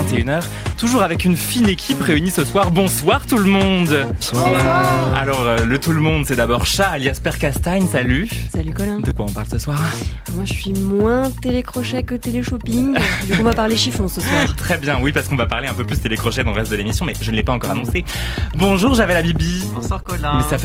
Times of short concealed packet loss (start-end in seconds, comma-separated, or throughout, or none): 9.09-9.13, 20.03-20.07